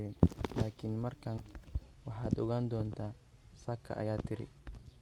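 A skip ahead at 1.37 to 1.39 s drops roughly a second of speech. That stretch was dropped while newer audio was already queued, so playback jumps straight across with no filler. The two sides are butted together almost directly.

Jitter buffer speed-up follows from 1.53 to 2.66 s at 107% speed, removing about a tenth of a second, and again from 3.06 to 4.73 s at 110%, removing about 150 ms. With the buffer holding more than its target, the receiver repeatedly cut out pitch-period-sized pieces. The speech sounds hurried while its pitch stays unchanged. Through both passes, the call path's coding texture and a top end stopping near 12 kHz remain audible, consistent with Opus around 32 kbps.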